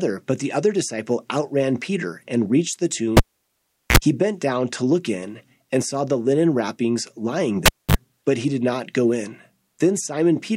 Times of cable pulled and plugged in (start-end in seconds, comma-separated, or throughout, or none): 3.17-3.97, 7.66-7.96